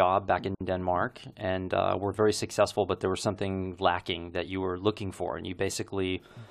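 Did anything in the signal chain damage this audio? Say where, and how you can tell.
Yes: a gap at a join of encoded pieces, codec stage. Speech drops out from 0.55 to 0.61 s, about 57 ms, then resumes where it stopped; unremoved encoder delay and padding.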